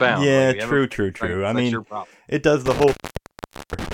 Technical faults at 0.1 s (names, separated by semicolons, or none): none